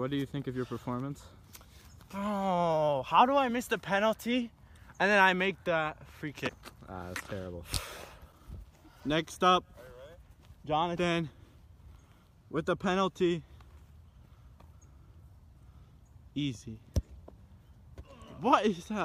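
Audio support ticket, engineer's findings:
Damaged data in a compressed stream at 6.48 s: short blip, under 20 ms. Corrupted bytes in the encoded stream; decoder misreads the frame, loses sync, resumes at the next valid frame header.

Damaged data in a compressed stream again at 10.96 s: same brief blip, same signature. Second corrupted region; decoder recovers within about 15 ms. Probable component: transport or storage upstream of the decoder.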